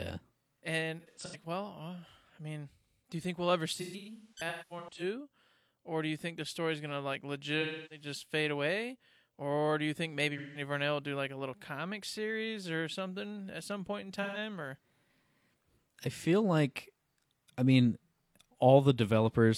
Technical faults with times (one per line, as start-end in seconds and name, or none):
0.99-1.36 AAC frame loss with concealment
3.74-5.03 AAC frame loss with concealment
7.60-8.05 AAC frame loss with concealment
10.37-10.61 AAC frame loss with concealment
14.22-14.38 AAC frame loss with concealment